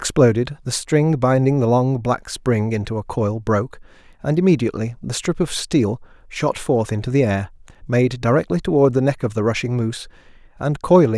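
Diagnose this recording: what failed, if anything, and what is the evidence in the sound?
Nothing in the signal chain failed: the speech holds a steady level and continuous playback throughout, with no dropouts, clicks, distortion, or timing disturbances at any stage from capture to playback.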